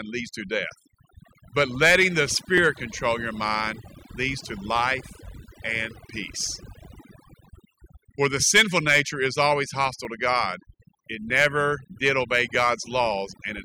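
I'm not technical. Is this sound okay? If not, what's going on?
No. Two things are wrong with this speech recording.

The first is overdone noise removal, and it lasts the whole clip. A cleanup tool was set too strong, so it cut away background noise together with the quiet edges of the voice. The gaps between words hold a near-silence with faint twinkling specks instead of a natural room sound.

The second is a regular clicking that starts at 1.33 s, just after "leads to death", and repeats about every 1.24 s until 12.55 s, roughly ten clicks in all. These are clock drift buffer slips. The likely cause is two pieces of equipment keeping time slightly differently, by roughly a tenth of a percent. The mismatch builds up until a few dozen samples of sound are skipped or repeated, and each jump is heard as a click.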